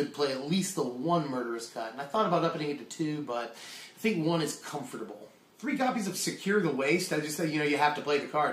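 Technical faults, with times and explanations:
0.86–2.86 s, adaptive stream at a lower bitrate: the treble abruptly thins and turns synthetic, with swirly artefacts, consistent with a drop to HE-AAC near 32 kbit/s. A spectrogram shows a sudden upper-band change to patchy, copied-looking texture, while the waveform runs on without a gap.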